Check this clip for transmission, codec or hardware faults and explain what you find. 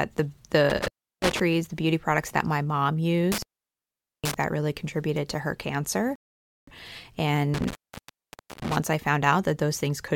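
Two kinds of fault are present: an intermittent contact that breaks the speech three times, and one rebuffering stall.

Between 0.70 and 1.40 s, 3.32 and 4.34 s, and 7.54 and 8.76 s, the speech drops out with crackle at each edge and faint hiss underneath. The gaps last 0.34 s, 0.81 s and 0.89 s. This is intermittent contact: a loose cable or plug momentarily opening the signal path.

At 6.16 s the audio falls to silence for 0.52 s, then picks up exactly where it stopped, with nothing missing. This is a rebuffering stall. The player exhausted its downloaded audio and waited for more, stretching the clip by that half second.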